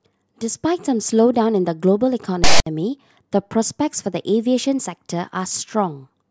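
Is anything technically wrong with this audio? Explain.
Yes. From 2.44 to 2.66 s, file tags played as audio: a block of text metadata with zero padding was decoded as samples. The text bytes give a loud, lopsided rasp with hard edges, and the padding drops into dead silence before the speech resumes.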